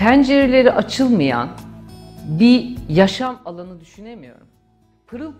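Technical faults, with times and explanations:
3.08 to 3.4 s, zipper noise: the level falls about 20 dB in unsmoothed 3 dB steps, around twenty a second. Each step ticks.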